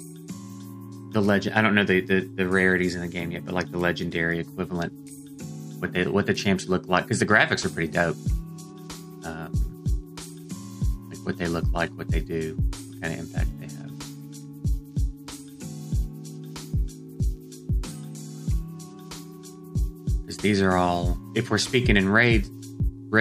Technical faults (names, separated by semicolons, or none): none